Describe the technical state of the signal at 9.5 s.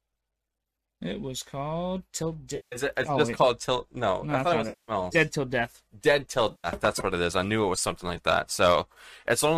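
At 9.5 s the speech signal is intact, with no fault present at that moment.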